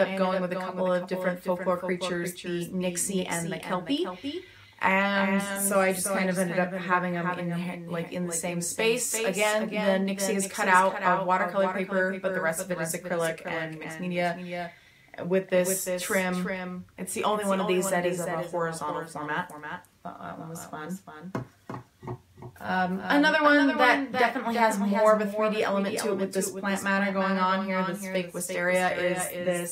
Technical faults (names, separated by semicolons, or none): doubled audio track